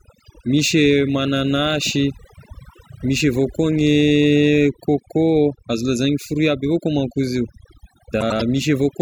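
Speech, and the whole clip has overdone noise removal. The denoiser was set too aggressively, so any frequency band that comes close to its noise estimate gets pulled way down or shut off, and the quieter parts of the voice get taken along with it. You can hear that as a background that drops away and breaks up into little twinkling specks. Then at 8.21 to 8.42 s there's a case of frames out of order: two adjacent blocks of about 96 ms each got decoded in swapped order, which points to runs of roughly four frames apiece. That stretch comes out as a garbled flutter. Nothing is actually missing, though, because the same audio is all there, just played back in the wrong sequence.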